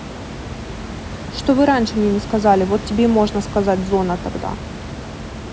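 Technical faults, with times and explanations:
Nothing technical goes wrong anywhere in this speech clip; the room noise sitting about 12 dB under the speech is simply part of the space it was recorded in.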